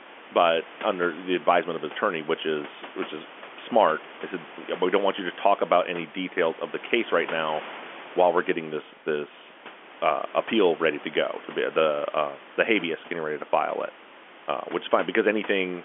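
A speech recording with no technical faults to report. Quiet room noise sits about 21 dB below the speech, and the narrow 250 Hz to 3.4 kHz band is what G.711 telephone coding carries.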